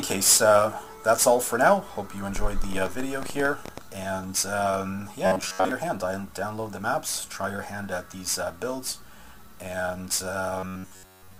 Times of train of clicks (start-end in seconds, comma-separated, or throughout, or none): 2.36-3.79